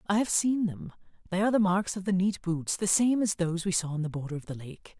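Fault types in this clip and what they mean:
No fault types can be heard in this clip.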